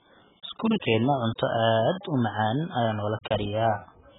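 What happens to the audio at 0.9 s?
At 0.9 s the speech carries the same damage heard across the whole clip: nothing above 3.8 kHz, with a dull, smeared, warbling quality on sustained sounds. That points to heavy AAC compression as the likely cause, with the encoder discarding high bands and coarsely quantising the rest, which fits a very low bitrate near 8 kbps.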